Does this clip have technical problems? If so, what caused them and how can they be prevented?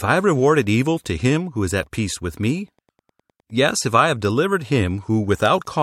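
Yes, there is Wi-Fi interference throughout. A nearby Wi-Fi radio's beacon, sent every 102.4 ms, is being picked up and rectified by the audio circuit, leaving a steady ticking about ten times a second, roughly 40 dB below the speech. Keeping routers and phones away from the recording gear and using shielded, balanced cabling prevents it.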